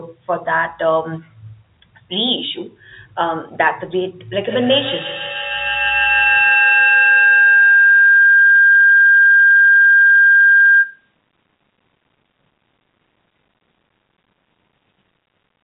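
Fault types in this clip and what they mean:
Feedback howl: Sound from a loudspeaker reaches a microphone and comes back louder on every trip around the loop. From 4.44 s the speech begins to ring instead of dying away. The ringing narrows to one tone near 1.5 kHz. It pulses about every 150 ms, the time of one trip around the loop. At its loudest it sits about 4 dB above the speech. It ends at 11.15 s, when the loop is broken.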